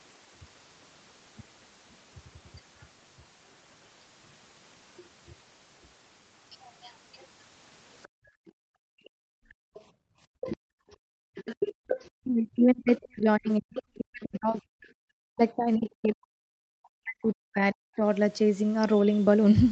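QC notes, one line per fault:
4.97–5.03 s, 8.03–11.97 s, 12.96–13.82 s, 15.84–15.90 s, other side's voice leaking through: the echo canceller likely left loudspeaker playback in the microphone, so a second voice intrudes. It is faint in the brief scraps, and roughly 10 to 15 dB under the talker in the longer stretches.
8.08–10.13 s, 11.74–11.87 s, 14.90–15.04 s, background gated by the echo canceller: during loudspeaker playback the canceller clamped the microphone, so room sound drops by about 37 to 38 dB, then returns.
10.41–18.03 s, speech suppressed in double talk: with both sides talking, the canceller likely mistook the talker for echo. The voice dips by as much as roughly 40 dB, for around five seconds in all.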